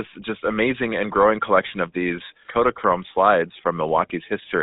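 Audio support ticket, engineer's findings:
Buzzy, gravelly roughness on speech throughout; band limited to roughly 250 Hz to 3.7 kHz. Probable component: GSM full-rate codec, consistent with 13 kbps. Pulse-excited vocal-tract model discards excitation detail, giving plainly audible codec damage.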